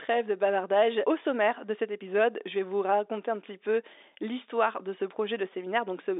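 No technical faults can be heard anywhere in the speech. It comes over a G.711 telephone line, so the sound sits in a narrow band of roughly 300 Hz to 3.7 kHz, with nothing above about 3.8 kHz.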